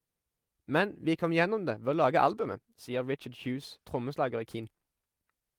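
Clock drift between sender and receiver runs through the whole speech clip, with the sender's clock running roughly 4 percent faster than the receiver's. Audio arrives a little faster than it is played out, so the jitter buffer keeps filling and must be trimmed back. The result is faint, irregular hiccups rather than a steady pitch or speed change. Unlike a one-off buffer underrun, no single gap stands out, and unlike packet loss, nothing is clearly missing.

Repeated timing corrections are heard from 0.22 s to 5.41 s, where the receiver keeps cutting tiny slices to keep pace with the sender at 104 percent speed. Because the sender is faster, every correction is a removal, never a repeat. That shows up as small skips and a slightly hurried, uneven tempo. What separates this from time-stretching or resampling is that the unevenness comes in discrete, unevenly spaced jumps instead of a smooth shift.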